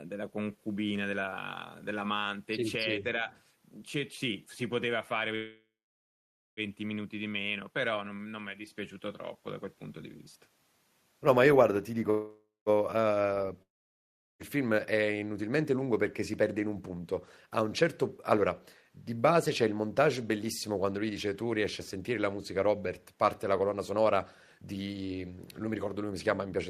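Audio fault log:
5.35–6.60 s, call audio freeze: sound stretches into a fading buzz, then about 0.9 s of silence before resuming intact; likely delayed packets emptying the jitter buffer.
12.10–12.69 s, call audio freeze: same pattern, roughly 0.56 s inserted with a brief fading tail and 0.2 s of silence, nothing lost.
13.62–14.42 s, long network dropout: fading buzz then about 0.75 s of silence, and around 0.78 s of audio never returns; likely lost packets rather than delayed ones.
16.42–26.69 s, jitter buffer speed-up: audio runs at about 112% speed with unchanged pitch, sounding hurried, as roughly one and a half seconds of short pitch-period pieces are trimmed to reduce buffered delay.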